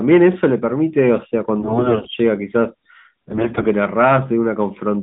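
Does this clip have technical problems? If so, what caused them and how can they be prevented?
Yes. AMR bit errors hit from 1.60 to 2.15 s and again from 3.28 to 3.67 s, where the sound keeps its pitch and level but turns hoarse, scratchy and gargly. Heavy corruption in the first stretch, roughly a third of the weakly protected bits, and lighter corruption in the second, around a sixth, flipped those bits while the checksum on the essential bits still passed. The decoder therefore placed its excitation pulses wrongly and applied wrong finer pitch, gain and spectral values. All of this passes through a narrowband line limited to roughly 150 Hz to 3.7 kHz, which fits the AMR-NB 12.2 kbps mode. Preventing this takes a stronger radio link or more robust channel coding, such as a lower AMR mode with more error protection.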